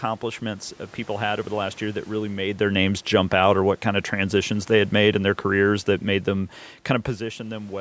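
From 2.63 s to 7.13 s there's automatic gain falling. The gain control judged the input too hot or its background noise too strong and gradually pulled its gain down by about 5 dB, so the speech and the room noise behind it sink together, separate from the talker shifting position just before.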